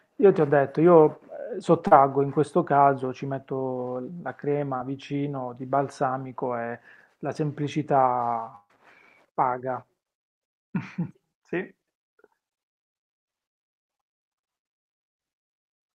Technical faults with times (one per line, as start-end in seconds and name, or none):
1.87-1.93 short concealed packet loss
4.77-4.81 short concealed packet loss
8.55-8.71 burst of packet loss